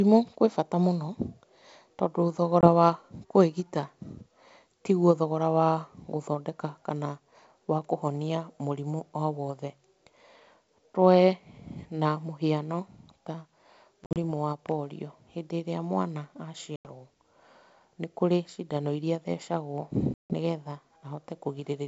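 Packet loss on an ADPCM call cuts hard silent holes at 2.61 s (before "wa kũĩgita"), 14.04 s (scattered), 16.76 s and 20.14 s (after "iria athecagwo"). Unlike plain dropouts, the speech then returns slightly distorted while the decoder's predictor resynchronises.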